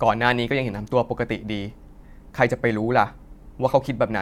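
No technical fault can be heard anywhere in the speech recording, and the signal holds steady throughout.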